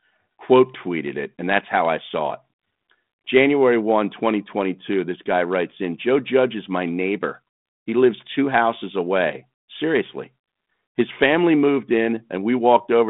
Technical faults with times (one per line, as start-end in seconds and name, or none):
none